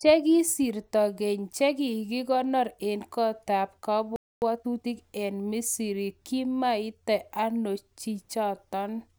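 At 4.16 s the player most likely ran short of buffered data or had its output thread held up, producing a playback stall: the speech cuts off mid-flow and the output sits silent for about 0.26 s before resuming at 4.42 s.

From 4.42 to 4.92 s the player works off the backlog from that gap with time-compressed catch-up, trimming and cross-fading small slices so the speech runs at about 1.5 times normal speed. It sounds hurried but keeps its normal pitch.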